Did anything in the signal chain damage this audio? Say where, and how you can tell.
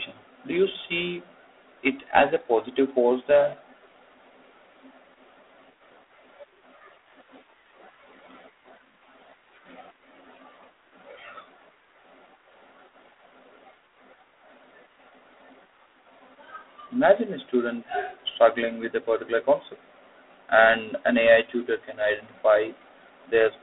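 Yes, at the codec stage, across the whole speech clip: G.726 ADPCM compression. The speech has a harsh, rasping hiss that swells and fades with its level, and nothing is present above 3.8 kHz, which fits G.726 at 24 kbit/s, about 3 bits per sample. On a spectrogram, energy sits in a telephone band from 250 Hz to 3.6 kHz under a flat ceiling. Grainy noise fills the gaps between harmonics, rising and falling with the speech level.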